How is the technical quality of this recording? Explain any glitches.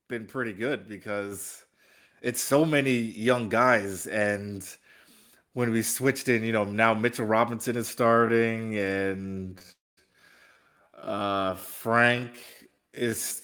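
The recording has four distinct glitches: a sudden level jump, a long slowed-down stretch, and two brief interruptions inside that stretch.

At 1.32 s, right after "been pretty good", the voice and the background noise both get louder at once, by about 5 dB. This is a microphone volume stepped up. The call software judged the input too quiet and raised the device's input gain in a single step rather than a gradual ramp, so the change lands abruptly and both voice and room noise rise together.

From 8.04 s to the end, starting just before "in the backcourt so", the pace suddenly drops to roughly 0.57 times normal speed while the pitch stays the same. This is a time-stretched section, likely produced by software lengthening the audio to fill a set duration. It keeps the pitch by repeating short slices of the waveform.

From 9.58 s to 9.63 s, a sound is held about 22 ms too long, with a slight buzz or dip. 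This is a short stall from a late packet. The packet wasn't there when due, so the jitter buffer ran dry and the receiver extended the last sound until it arrived. Playback then resumed at the same place, so nothing was lost, only delayed.

From 9.72 s to 9.99 s there is a call audio freeze lasting about 253 ms. The last sound trails off briefly, then roughly 210 ms of silence follows before the speech resumes exactly where it stopped. The likely cause is packets held up in transit, which emptied the jitter buffer. The receiver padded the wait with a fading continuation and then silence, so a gap was inserted and no speech is missing.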